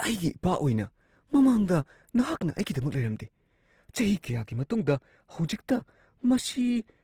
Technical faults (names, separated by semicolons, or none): Opus compression; pre-echo